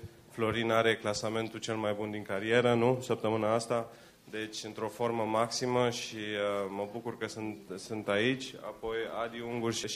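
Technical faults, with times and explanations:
Nothing technical stands out here; the audio comes across without any glitches, dropouts or odd artefacts worth flagging.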